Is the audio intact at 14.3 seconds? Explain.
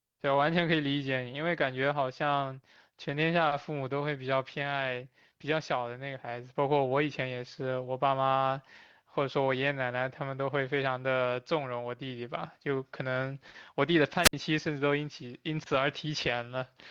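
No. Between 14.22 and 14.33 s there is a wireless microphone squelch dropout: the radio link from the transmitter fades, so the receiver's squelch mutes its output. A brief swell of hiss gives way to a near-silent gap of about 59 ms before the speech returns.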